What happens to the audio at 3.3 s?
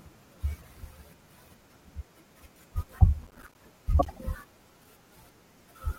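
A gritty burst of crackle tears through the speech from 3.23 to 3.55 s: processor overload crackle, with dozens of missed buffers of around 5 ms each leaving hard-edged silent gaps.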